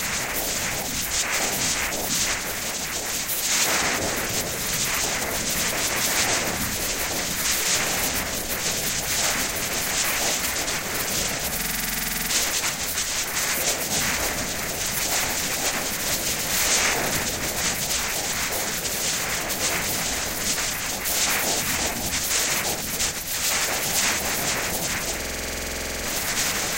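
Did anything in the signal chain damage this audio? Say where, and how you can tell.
Yes: a system hang loop at the driver/buffer stage, 11.61–12.31 s and 25.22–26.05 s. One 46.4 ms chunk repeats identically at 21.5 Hz, which fits a 2048-sample buffer, rather than dropping to silence.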